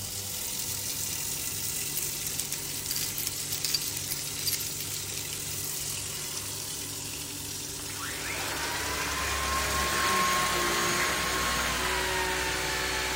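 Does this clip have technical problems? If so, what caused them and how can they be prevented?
No, nothing in this audio stood out as a technical problem on listening, so there is nothing here to trace to a cause or prevent.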